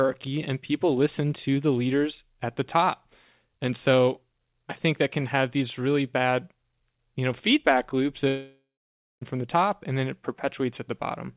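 Just after "you know feedback loops", at 8.28 s, the sound breaks off into a long network dropout lasting until 9.23 s, likely from a stretch of lost packets. For the first few tenths of a second the receiver extends the last sound as a fading buzz, then about 0.56 s of near-silence follows before the audio resumes at "from the top and", with the gap's content missing. On a spectrogram, which stops at 4 kHz here as expected for G.711, the harmonics smear into a decaying band and then go dark. On the waveform, the envelope shrinks to a flat line.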